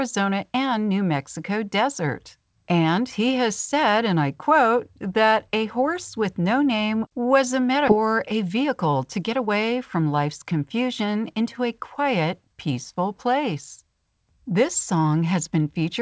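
At 7.88 to 7.90 s, right after "no name was a", a skip ahead occurs. Around 0.7 s of speech is discarded while later audio was already queued, and the two sides are spliced with no silence or fill. Unlike a dropout, nothing pauses; the sound simply lurches forward.

From 7.97 to 10.05 s, leading up to "life's confusion into a", a jitter buffer speed-up follows. The receiver trims short pitch-period pieces repeatedly, removing roughly 0.15 s. Speech runs about 7% fast and sounds hurried, but unlike a resampling error the pitch stays unchanged. Throughout, the G.722 call path leaves nothing above 8 kHz.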